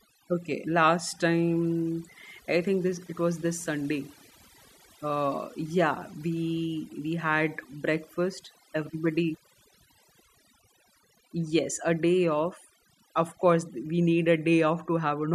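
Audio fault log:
throughout, overdone noise removal: the noise reduction stage was set too aggressively, pulling individual frequency bands down or out whenever they sat near its noise estimate. Quiet parts of the speech vanish with them, leaving near-silent gaps flecked with twinkling specks.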